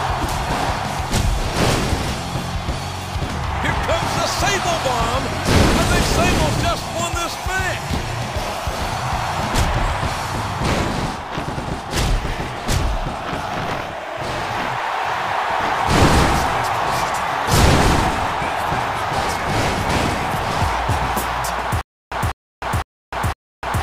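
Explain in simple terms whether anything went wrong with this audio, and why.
Stutter with silent gaps from 21.81 s to the end: a 0.2 s burst repeats four times between 0.3 s silences, likely a stalled stream replaying its last fragment.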